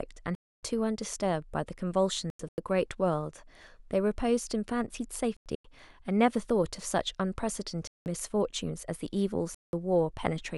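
Corrupt frames muted in this speech at 0.35–0.63, 2.30–2.58, 5.37–5.64, 7.85–8.06 and 9.53–9.73 s: abrupt silences of 0.2–0.3 s, consistent with about three damaged compressed frames the decoder rejected and the player replaced with silence, timing preserved.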